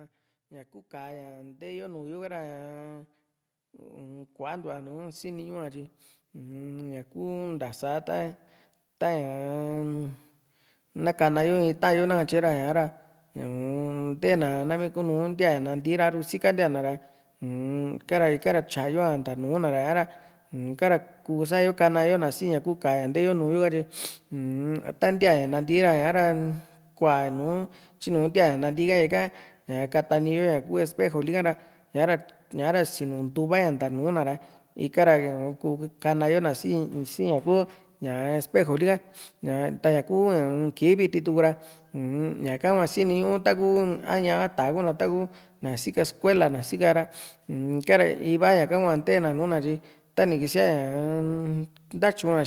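From 0.5 s to 25.0 s the automatic gain rising is heard as a slow, steady climb of about 21 dB. The control judged the input too quiet and kept adding gain. Because the background swells right along with the speech, it is gain, not a speaker drawing nearer.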